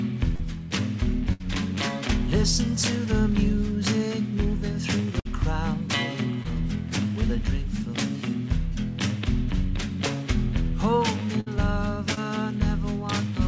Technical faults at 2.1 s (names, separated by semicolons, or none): none